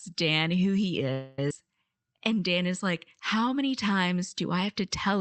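Packets were likely held up in transit and the jitter buffer ran dry, producing a call audio freeze from 1.12 to 1.39 s. The receiver stretched the last sound into a fading buzz or hiss for about 255 ms, then the speech resumed exactly where it had stopped, with nothing lost.

Between 1.49 and 1.51 s, a stretch of speech was dropped while later audio was already queued, causing a skip ahead. Roughly 150 ms of speech vanishes, and the two sides of the jump are stitched together with only a brief 14 ms join.

From 1.64 to 3.40 s, the jitter buffer slow-down rebuilds its reserve by repeating single pitch periods over and over, adding 155 ms in total. The speech plays at about 92% speed at unchanged pitch, so sounds are drawn out, heard through the call path's Opus band limit at 8 kHz.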